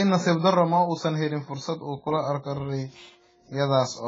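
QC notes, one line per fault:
Throughout, AAC compression: the speech sounds dull and smeared, with nothing above 7.5 kHz, so sibilants lose their crispness and turn fizzy, and sustained sounds carry a watery warble. This is likely heavy AAC-LC coding at a very low bitrate, fitting something around 16 kbps. At that rate the encoder lowers its cut-off and quantises coarsely, leaving gaps in the spectrum that shift from frame to frame and create the smeared, unstable texture.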